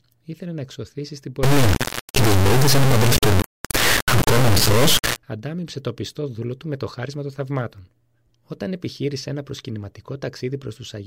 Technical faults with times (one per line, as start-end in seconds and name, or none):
1.43-5.17 integer read as float